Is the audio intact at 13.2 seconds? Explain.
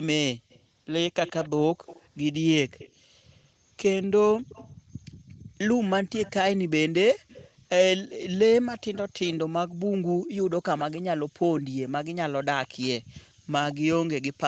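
No. The room sound dips by about 40 dB between 13.02 and 13.47 s, background gated by the echo canceller as it clamped the microphone. Underneath, a faint copy of the sound trails about 0.15 s behind. This echo leak runs from 0.5 to 14.41 s and is likely far-end loudspeaker output that the canceller didn't fully remove.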